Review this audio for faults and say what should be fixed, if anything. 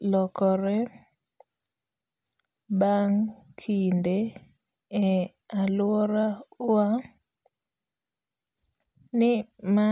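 No faults turn up in this speech recording, so nothing needs to be fixed. There is nothing here to correct or guard against.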